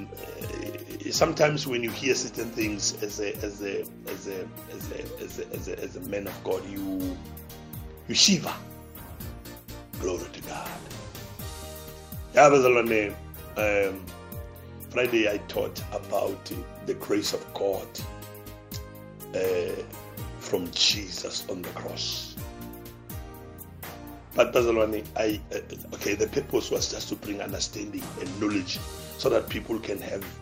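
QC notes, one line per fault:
15.97 to 17.47 s, crude rate conversion: For this stretch the audio appears to have been moved between rates by simply repeating the nearest sample instead of filtering. The irregular repetition pattern fits a jump from 44.1 kHz to 48 kHz. It leaves a distortion roughly 20 dB below the signal. That error forms tones unrelated to the material, heard as a gritty, inharmonic fizz that rides on the louder and brighter parts of the sound.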